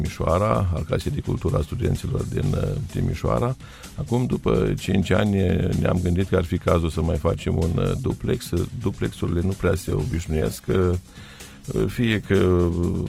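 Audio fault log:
9.65–13.08 s, call bitrate drop: the encoder got starved, so the audio turns coarse and muffled to the end, as if cut from 128 to 19 kbps.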